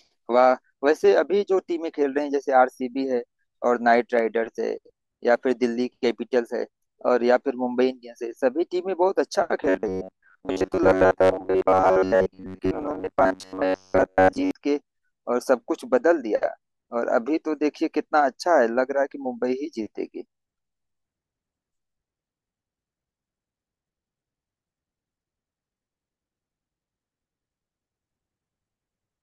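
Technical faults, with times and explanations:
9.63 to 14.51 s, robotic sound from repeated short buffers: the speech turns into a stiff, metallic buzz pitched at about 93.8 Hz that still loosely tracks the syllables. This is likely a playback path starved of fresh audio, looping a fragment of roughly 10.7 ms (one over 93.8 Hz) to cover the gaps. For most of this stretch the same slice is replayed instead of new material, so the loop rate sets a fixed pitch.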